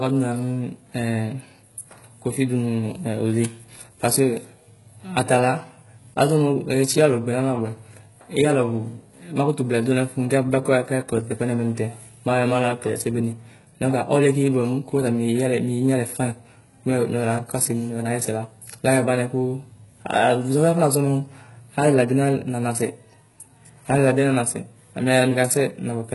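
Speech, with heavy codec damage running through the whole recording. The treble sounds present but synthetic: s sounds come out gritty, lispy and metallic, and nothing survives above 11.5 kHz. This is likely HE-AAC compression at a very low bitrate, consistent with something near 12 kbps, where only the lower spectrum is truly coded and the upper bands are rebuilt by copying lower content upward under a coarse envelope, so the harmonics fail to line up across the crossover.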